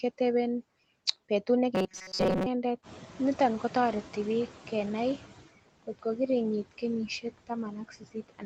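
Throughout the speech, noise suppressor artifacts cut the background by about 18 dB, leaving a residue that shows as speckled, patchy noise between harmonic bands on a spectrogram below the 8 kHz ceiling.

From 1.75 to 2.46 s the speech becomes a rigid metallic buzz at 188 Hz, likely from repeated short buffers of roughly 5.3 ms covering most of that stretch. It appears as evenly spaced vertical striations on a spectrogram.

When the room noise jumps by about 13 dB near 3 s, the noise suppressor is catching up from 2.82 to 5.38 s. The noise leaks through with less reduction at first, then fades over 2.56 s as reduction reaches about 13 dB. On a spectrogram, the noise floor brightens and then gradually darkens.

Speech cut by the noise suppressor occurs from 5.83 to 6.18 s (deepest drop about 21 dB), 7.07 to 7.51 s, and 7.71 to 8.46 s (about 19 dB each). Faint consonants and endings sound swallowed, with about a tenth of a second affected in each of the first two. 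On a waveform the envelope shows sudden dips, and on a spectrogram the high-frequency energy has gaps.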